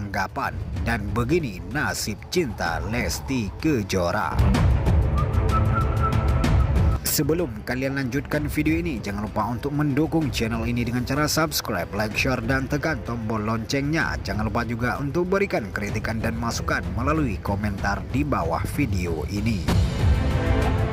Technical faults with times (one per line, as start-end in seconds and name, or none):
3.01 overlap between stream segments
9.01 overlap between stream segments
14.99 overlap between stream segments